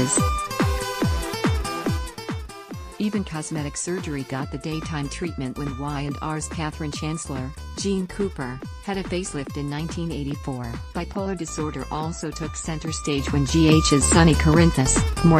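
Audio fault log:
12.8–13.88 s, zipper noise: the level shifts by roughly 15 dB in unsmoothed steps of about 2 dB, around seven per second. Each abrupt jump puts a small click into the waveform, so the move is heard as a ticking zip over the sound.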